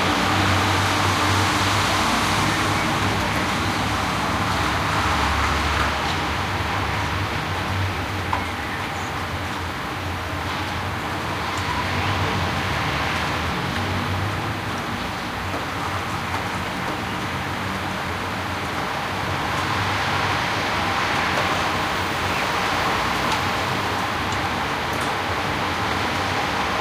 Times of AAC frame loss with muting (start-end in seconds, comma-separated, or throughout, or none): none